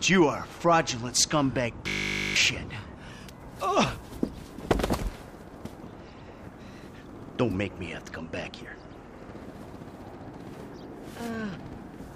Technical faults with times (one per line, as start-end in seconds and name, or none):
1.88-2.36 system hang loop